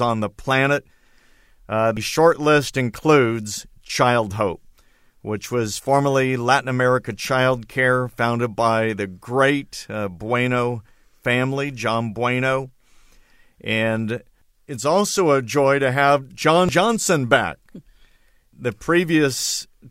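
Damaged data in a compressed stream shows up at 1.97 s and again at 16.69 s, each a brief blip in the speech. Corrupted bytes there make the decoder misread those frames and lose sync until it finds the next valid frame header.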